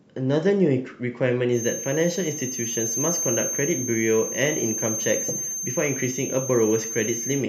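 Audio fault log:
1.50–7.48 s, feedback whistle: a thin, steady 6.3 kHz tone comes in and hangs about 5 dB under the speech right to the end, wobbling a little in level. Likely a speaker-to-mic loop sitting right at the edge of feedback.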